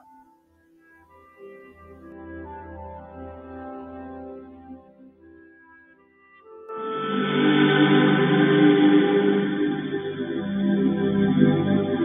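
A speech-tuned noise suppressor stays active through the whole clip. It treats sustained sound and tails as noise, so the level swings by about 15 dB. Onsets survive while held parts sink, and the audio pumps and thins. The sound cut by the noise suppressor shows from 0.23 to 1.41 s, dropping by about 14 dB at its deepest. It happens again from 4.46 to 6.47 s, with a drop of about 13 dB. In both spans the steady content fades while attacks come through. At 6.69 s the tone changes abruptly with no gap. The band narrows, the level shifts by about 5 dB, and a new noise floor sits roughly 35 dB below the signal. This continues to the end and likely comes from the input switching to a poorer device.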